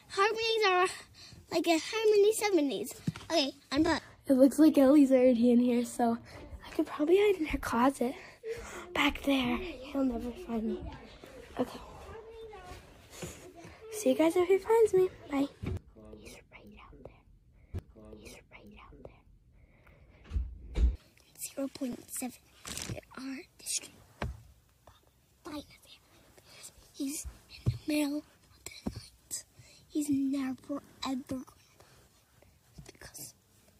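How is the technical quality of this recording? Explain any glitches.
Two glitches stand out. From 17.73 to 19.73 s, about two seconds of sound plays again after a small blip at the jump back. This is a stream segment repeated: the player fetched or queued the same segment twice. Between 21.93 and 21.95 s there is a brief click-like stutter where 20 ms plays twice. These are overlapping chunks: the audio was handled in 6-second pieces, and this piece began before the previous one ended.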